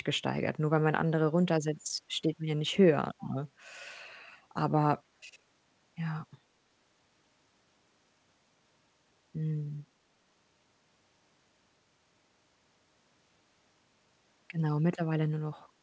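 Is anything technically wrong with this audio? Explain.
Yes. There is an echo leak at 3.19 to 3.30 s: a faint, delayed copy of the speech arriving about 403 ms late and roughly 25 dB below it, likely from a far-end loudspeaker whose echo canceller let part of the sound back into the call, heard here as a brief scrap alongside the G.722 call audio's cutoff above 8 kHz.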